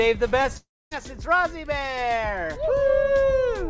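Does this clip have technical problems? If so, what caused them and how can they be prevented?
Yes, there are two network faults.

The first is a short concealed packet loss at 0.42 to 0.45 s. About 20 ms of audio never reached the decoder in time. The receiver extended the preceding sound to cover the gap and then blended back into the real signal, so what you hear is a quick smear or wobble rather than a break. It differs from a dropout in that nothing falls silent. Wired connections or a jitter buffer with a little more headroom would help prevent this.

The second sounds like a long network dropout from 0.57 to 0.93 s. About 340 ms is lost. The last sound carries on as a fading buzz or hiss, which then gives way to roughly a quarter of a second of silence before the audio resumes further along, with that stretch simply gone. The silence and the jump forward separate it from the brief smear of concealed loss. 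The likely cause is a stall on the network path. A stable link with forward error correction, or redundancy enabled, reduces the risk of this happening.

Through all of this, the G.722 call path at 64 kbps limits the audio to below 8 kHz, which fits a 16 kHz wideband link.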